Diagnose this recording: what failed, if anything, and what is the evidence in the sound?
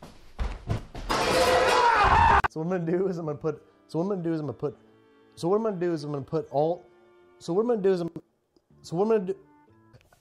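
Chunks out of order at the buffer or network delivery stage: 40 ms blocks of audio were handed on late and played after the blocks meant to follow them. At 2.4 to 2.48 s one block lands a single position late, and at 8.08 to 8.2 s one lands two positions late, giving a longer jumbled stretch. Nothing is missing, but each swap creates three hard joins, heard as a brief garbled moment.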